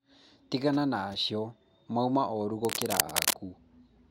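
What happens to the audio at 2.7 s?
From 2.65 to 3.33 s, cable scratch noise, roughly as loud as the speech, rustles and scrapes over it, likely from a worn cable or connector being moved.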